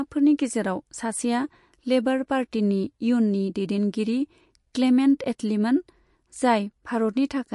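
From start to finish the speech carries plainly audible MP3 compression artefacts. Nothing sounds above about 11.2 kHz, so the treble is cut flat. Weak frequency lines flicker between frames, giving a watery, swirly texture. The damage suggests a bitrate near 49 kbps, likely too low for clean encoding.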